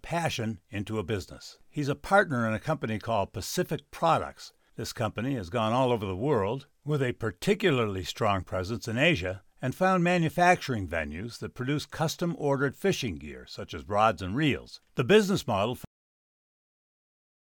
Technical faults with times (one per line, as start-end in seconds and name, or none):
15.85-17.58 cut-off end